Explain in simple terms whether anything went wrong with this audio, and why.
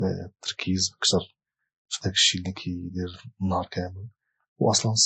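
Yes, something went wrong for the whole length of the speech. It carries the smeared, watery character of heavy compression, and nothing is heard above about 19.6 kHz. This is likely low-bitrate audio saved at a high bitrate. The larger file cannot restore what the first squeeze removed.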